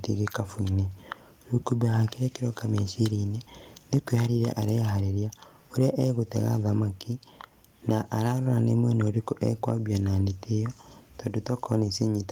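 A speech recording, and between 3.93 and 4.15 s, just before "areharĩria ũrĩa", the input level was likely set too high for the converter, producing microphone overload. Peaks drive about 2 dB past the converter's limit, so their tops are sheared flat, affecting around one percent of samples in that stretch. The flattened waveform adds a harsh, crackling edge to the loudest syllables there.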